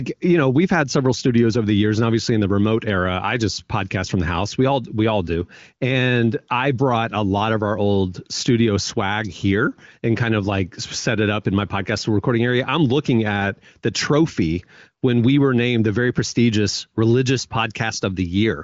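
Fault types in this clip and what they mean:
No faults found; the speech is carried by the AMR wideband (HD Voice) codec at 23.05 kbit/s, with content reaching about 7.5 kHz and any coding damage faint at most.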